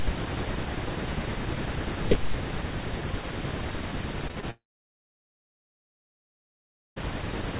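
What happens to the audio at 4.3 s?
A short concealed packet loss runs from 4.28 to 4.31 s. About 20 ms of audio never arrived, and the receiver papered over the hole with roughly 12 ms synthesized from the preceding sound before blending back. It is heard as a brief smear or wobble. On a waveform it shows as a few copied cycles, and on a spectrogram as a brief blurred column.

A burst of packet loss follows immediately, from 4.31 to 4.38 s. Around 40 ms went missing, and about 50 ms of concealment extends the last sound while turning it down, so it becomes a dying buzz or hiss before the audio resumes further along. The waveform shows a shrinking repeated pattern followed by an abrupt jump. The spectrogram shows frozen, fading bands.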